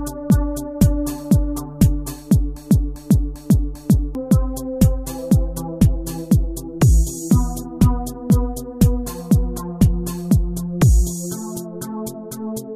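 A broken-record loop runs from 2.57 to 4.15 s: a 0.40 s fragment repeats four times back to back, likely because the player or stream stalled and resent its last buffer. The waveform and spectrogram show identical blocks tiled at 0.40 s intervals, and the audio for that stretch is missing.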